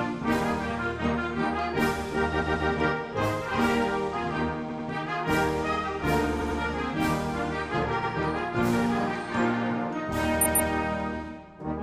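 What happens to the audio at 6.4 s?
At 6.37 s the audio stutters: a 92.9 ms block plays twice more than it should, through about 6.55 s. This is a repeated frames fault. A short run of compressed frames was written or delivered more than once, so the decoder simply plays the same slice again. Each restart jumps back to the start of the block, giving an audible catch at each repeat. The duplication adds 185.8 ms, so everything after this point arrives that much later.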